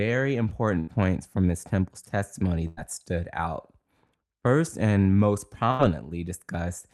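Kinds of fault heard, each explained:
Burst of packet loss: at 0.79, 2.67 and 5.71 s the sound turns into a fading held buzz or hiss, then jumps ahead. Each time 80 to 100 ms was lost in transit, and the receiver stretched the last sound across the gap.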